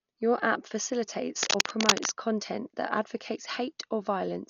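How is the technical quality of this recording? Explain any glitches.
The technical quality is poor: heavy coding damage runs through the whole speech clip, and a burst of scratching interrupts it partway through.

Throughout, the sound is dull and band-limited, with rough, fluttering noise clinging to voiced tones, likely from Dolby Digital compression at a very low rate, which fits a 48 kbps stream. The encoder drops the upper band and leaves many frequency lines without detail, which the decoder fills with noise. On a spectrogram the top is cut off flat, and the harmonics look blotchy and speckled.

From 1.43 to 2.12 s, just before "content that advocates", dense, uneven rustling sits over the speech, slightly louder than it. This is cable scratch noise, likely from a worn cable or connector shifting, so its contact resistance fluctuates. The waveform shows jagged spiky bursts, and the spectrogram shows broadband vertical streaks.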